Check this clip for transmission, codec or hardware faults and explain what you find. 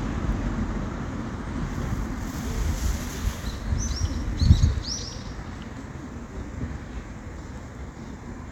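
One fault turns up, at 0.32 s: a block of digital silence. For about 0.73 ms the signal was replaced by zeros, which fits a 32-sample block that was never written, most likely because the program did not fill the output buffer in time. The sound drops out abruptly and comes straight back with no fade. At this length no gap can be heard. The two abrupt edges merge into a single tick or dip.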